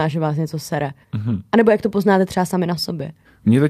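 No faults are audible anywhere in this speech recording.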